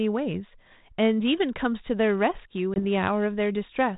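At 2.74 s a 20 ms hole, about one packet, cuts the speech to silence; the ADPCM decoder's predictor then resumes mistracked, leaving the speech slightly distorted as it settles around 2.80 s.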